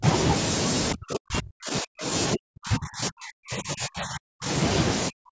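Speech with its level pulled down hard at 0 to 0.04 s, 0.94 to 2.12 s, 2.34 to 4.49 s and 5.09 s to the end, dropping by roughly 40 dB at its deepest (about 25 dB in the first brief dip). This is likely speech suppressed in double talk, where an echo canceller mistakes the talker for loudspeaker echo and attenuates both.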